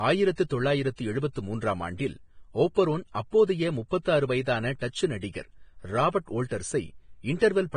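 A speech recording runs with heavy, grainy damage throughout: the treble is rough and hissy, and nothing is present above about 9.7 kHz. This is most likely Vorbis compression at a low setting, consistent with roughly 24 kbps. The codec keeps a smooth spectral floor but quantises the upper residue so coarsely that fine detail turns into noise of similar energy. That is why it sounds hissy rather than warbly. It does not have the metallic, swirling artefacts typical of MP3 at similar rates. The sharp, fixed top edge also separates it from ordinary background hiss, which would extend higher.

At 4.79 to 4.81 s, a pre-echo of about 26 ms puts a smear of hiss just ahead of a sharp onset, which itself sounds softened. A sudden attack late in a transform block spreads noise sized for the loud part back into the quiet moment before it. Unlike a click or reverb, the noise comes before the attack rather than after it, and it is as short as one block.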